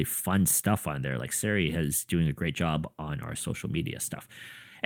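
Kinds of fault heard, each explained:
No kinds of fault are heard in this speech clip.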